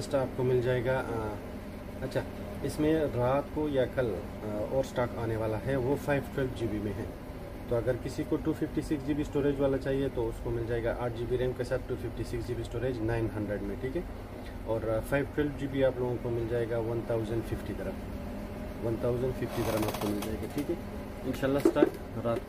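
No dropouts, clicks, distortion, level jumps or timing glitches turn up anywhere in the recording.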